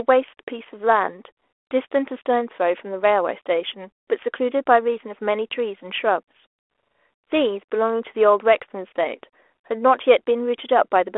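No technical faults are present.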